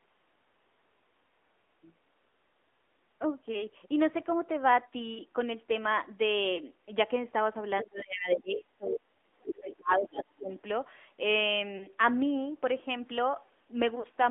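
Throughout, the audio carries the AMR narrowband mobile codec: the line passes roughly 250 Hz to 3.5 kHz, so it sounds thin with no air above. The coding damage is plainly audible as a buzzy, synthetic edge, which fits a mid-range AMR-NB rate of around 10 kbps.

At 6.56 to 6.60 s, a lost AMR speech frame causes a brief dip and warble. About 20 ms of sound was not received, and the decoder bridged the gap by repeating its last good settings at lower gain.

From 7.80 s, the other side's voice leaks through in scraps at 7.80 to 7.85 s, 8.84 to 8.99 s, 9.48 to 9.75 s and 10.01 to 10.17 s. These sit roughly 10 to 20 dB below the talker. This is likely residual loudspeaker echo that the canceller failed to remove.

Overlapping this, from 7.83 to 10.51 s, there is speech suppressed in double talk. The talker's level repeatedly drops, at its deepest by around 30 dB, over about two seconds in total. 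This is likely the echo canceller attenuating everything while both ends were active.

Further lost AMR speech frames follow. At 11.78 to 11.87 s, a single 20 ms loss gives a short warble. At 13.99 to 14.06 s, a 40 ms loss draws the sound out and fades it before recovery.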